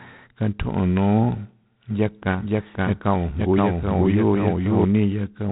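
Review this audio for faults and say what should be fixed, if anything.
G.726 ADPCM runs the whole way through. There's a harsh, rasping hiss riding on the speech level and nothing above 3.9 kHz, which sounds like 24 kbit/s. Keep that leg at 32 kbit/s or use a wideband codec.

A doubled audio track appears from 1.91 to 4.85 s. A full-band copy trails about half a second behind at roughly equal loudness, and it cuts in and out abruptly. That's likely a second, slower capture path or two out-of-step copies left in an edit. Check routing so only one path records, and audit edits for stacked copies.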